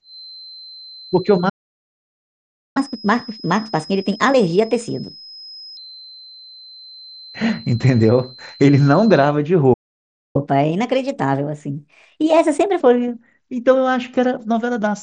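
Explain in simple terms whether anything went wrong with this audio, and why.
Yes, several things went wrong. From the start until 9.35 s, a faint, thin feedback whistle near 4.1 kHz sits behind the speech. It is likely the loudspeaker leaking back into the microphone.

The speech cuts out twice in playback stalls, from 1.49 to 2.77 s and from 9.73 to 10.36 s. The player likely ran short of data.

After each stall there is catch-up at higher speed. The speech runs 1.25 times fast and sounds about four semitones higher, from 2.77 to 5.77 s and from 10.36 to 12.81 s.

The Bluetooth mSBC headset link works as normal. It keeps the sound below about 8 kHz.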